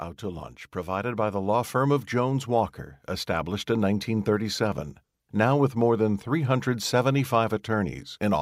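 From 0.2 s to 1.78 s the speech and the background noise beneath it swell together, growing about 6 dB louder over roughly a second and a half. That is automatic gain rising: the gain control judged the input too quiet and gradually raised its gain.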